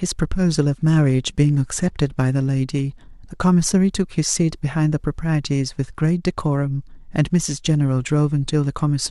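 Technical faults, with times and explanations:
0.74 to 3.47 s and 5.84 to 8.33 s, Bluetooth SBC bit pool drop: twice the speech turns dull and grainy for two to three seconds, then recovers its treble. The encoder cut its bit allocation to keep a congested link running, so the highest sub-bands got little or nothing and the rest were coarsely quantised. The loss of treble and the rough noise fit a drop from a bit pool of 31 to 16, around 110 kbps.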